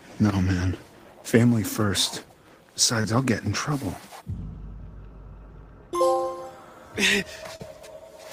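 At 3.01 to 3.06 s and again at 7.56 to 7.61 s there is short concealed packet loss. Audio missing for about 20 ms and then 40 ms never reached the decoder in time, so the receiver bridged the holes, for 27 ms and 32 ms, by extending the preceding sound before blending back. Each gap is heard as a brief smear or wobble rather than a silent dropout or a click.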